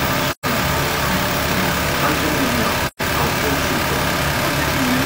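AAC frame loss with muting occurs twice, from 0.28 to 0.46 s and from 2.86 to 3.02 s. Each gap is a smooth-edged silence of about 128 ms, which points to roughly three consecutive frames going missing. The decoder zeroed the spectrum of those frames instead of concealing them, and the overlapping transform windows turn that loss into a fade down into the hole and a fade back up. The gaps therefore sound soft-edged.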